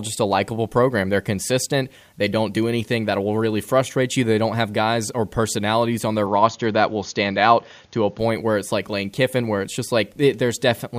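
At 6.26 s the speech suddenly loses its top end, with nothing above 6.8 kHz, and a faint new background noise comes in well below it. The level stays about the same and there's no gap. That's likely the input switched to a poorer device, until 8.19 s.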